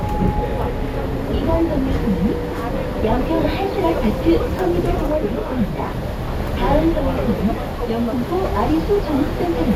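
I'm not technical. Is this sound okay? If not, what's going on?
No. There are three bursts of DAB burbling, from 1.52 to 1.96 s, 4.51 to 5.30 s and 6.28 to 6.49 s. Weak digital radio reception let data errors through, so parts of the sound get short blips of noise.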